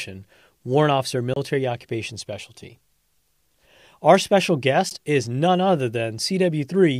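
At 1.34 to 1.36 s, then at 4.90 s before "is none other", the speech cuts to silence. These are Bluetooth dropouts, likely from late packets. Speech resumes further on.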